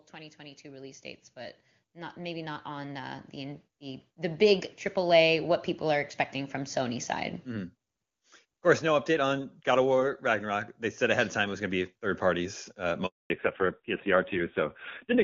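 From 0.13 to 8.62 s the automatic gain rising is at work: the gain control judged the input too quiet and kept raising its gain, by about 18 dB in total. The voice and the background noise swell together across those eight and a half seconds.

At 13.06 s a handover gap opens. The call was passed between networks and no speech frames arrived during the switch, so the voice fades out almost at once and the line stays silent for 240 ms until 13.30 s, losing whatever was said then.

From 13.30 s to the end the call shows a fallback to narrowband. Before this point the AMR wideband (HD Voice) coding sounds clear, with little or no audible codec damage, in keeping with a high-rate AMR-WB link around 23.85 kbit/s. After the switch nothing above 4 kHz remains, and the voice turns muffled and raspy, consistent with a low-rate AMR narrowband codec near 5.9 kbit/s.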